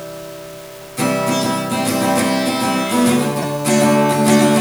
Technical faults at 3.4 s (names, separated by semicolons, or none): low bit depth without dither; corrupt frame decoded